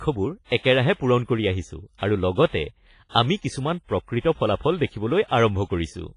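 WMA compression, likely, runs throughout: long transform blocks smear heavy, washy ringing around the speech, nothing survives above 10.5 kHz, fitting roughly 24 kbps.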